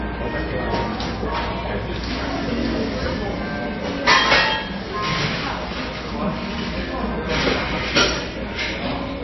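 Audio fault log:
Throughout: MP3 compression, likely. Nothing is heard above about 5.8 kHz, and the damage is plainly audible, with a watery, swirling texture, which fits a bitrate near 24 kbps. At that rate the encoder runs short of bits, cuts the treble and drops weak frequency lines that flicker frame to frame.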